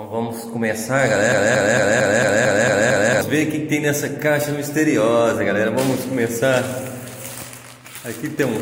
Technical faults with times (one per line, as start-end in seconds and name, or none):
1.32-3.21 broken-record loop